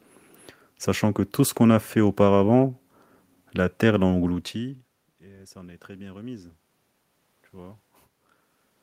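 From 4.21 to 6.59 s comes automatic gain rising: after the talker moves away around 4 s and the input drops about 22 dB, the gain control adds about 4 dB, swelling speech and room noise. The waveform envelope ramps up gradually; the spectrogram brightens evenly, background too.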